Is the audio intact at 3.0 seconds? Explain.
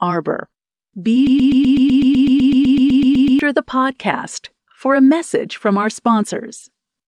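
No, 3.0 s sits inside a broken-record loop from 1.27 to 3.39 s: a 126 ms scrap of speech repeats 17 times, likely a stalled player resending its last buffer.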